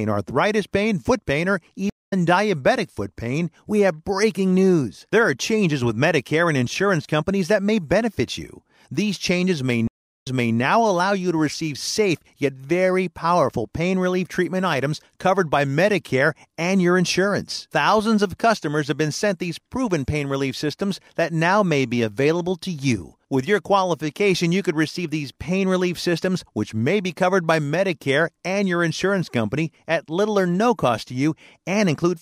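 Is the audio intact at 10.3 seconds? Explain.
No. At 10.3 seconds the speech sits inside a stream reconnect running from 9.87 to 10.57 s. After "changes may" the connection dropped and the audio goes silent for 355 ms. A fresh decoder then picked up the stream 340 ms earlier than where it broke, so a short stretch is heard twice before "allow you to receive". A waveform shows a flat gap and then repeated material. A spectrogram shows a blank column followed by a duplicated pattern.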